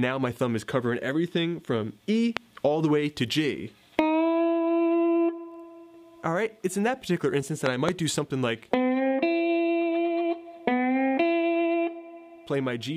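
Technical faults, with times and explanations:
2.37–2.39 s and 7.66–7.91 s, loud pop: a sudden voltage pulse, likely from a plug, switch or static, is added to the signal. It gives a sharp pop about 20 dB above the sound, then a quick double pop about 15 dB above, with the sound continuing underneath.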